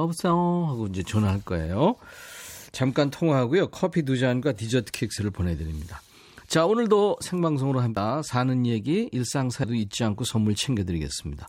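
Speech with compressed frames skipped at 5.18, 7.97 and 9.64 s. Each jump loses roughly a fifth, two fifths and three tenths of a second, multiples of a 92.9 ms frame. That points to whole frames missing or rejected.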